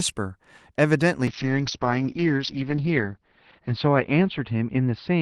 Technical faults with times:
1.29-5.21 call bitrate drop

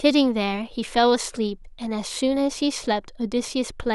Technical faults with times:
none

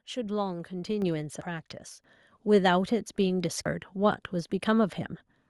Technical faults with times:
1.02 microphone volume stepped up
2.04 microphone volume stepped up
3.66 audio missing between chunks

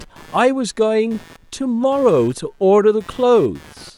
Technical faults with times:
0.00-3.98 computer activity noise

